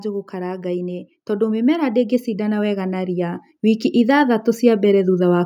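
From 0.05 s to 5.41 s, automatic gain rising lifts the level by about 12 dB as the control compensates for quiet input, swelling speech and background together.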